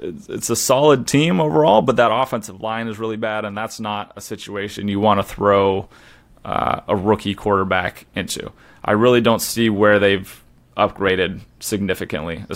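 After "a solid team overall", from 1.86 to 2.60 s, there is zipper noise. The level drops about 10 dB in unsmoothed 1 dB steps, roughly twenty a second, and each step clicks. A fast ticking runs until "line is really bad". A spectrogram shows evenly spaced vertical broadband lines, and the waveform envelope descends as a staircase.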